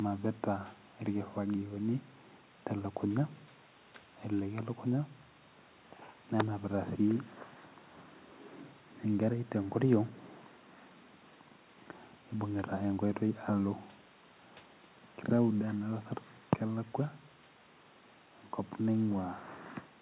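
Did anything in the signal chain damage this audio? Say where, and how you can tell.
No, nothing in the signal chain damaged this speech. Faint room noise sits about 42 dB below the voice, and nothing is present above 4 kHz, which points to a narrowband telephone codec such as G.711 A-law on a working call path.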